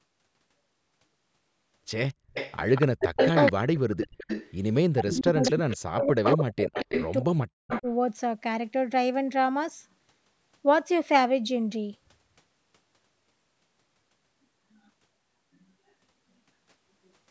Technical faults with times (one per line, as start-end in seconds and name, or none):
2.10-3.52 echo leak
2.83-4.30 speech suppressed in double talk
3.95-4.54 echo leak
4.92-7.86 speech suppressed in double talk
5.10-5.76 echo leak
6.23-7.11 echo leak
7.68-7.89 echo leak